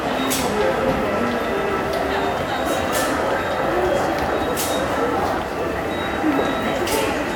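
No technical faults can be heard anywhere in the recording. The audio runs without any interruption, distortion or change in level that would point to a problem in how it was captured or carried.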